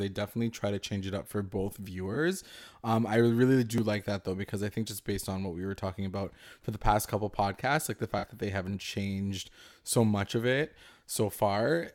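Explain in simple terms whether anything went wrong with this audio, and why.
AAC frame loss with concealment: pieces of the compressed stream went missing, and the decoder filled each gap by guessing from the sound just before it. Right after "it up for both", at 2.14 to 2.17 s, about 21 ms was patched, which fits one lost frame. After "like the", at 8.18 to 8.24 s, about 43 ms was patched, which fits two frames, just before "that they haven't changed". Each patch is a brief smeared, noisy blur.

Audio missing between chunks: this is likely caused by a recorder that works in 4-second pieces and drops a sliver at each handover. At 3.78 s, between "I really" and "like that though because", a few milliseconds vanish and the two sides join directly, giving a tiny skip.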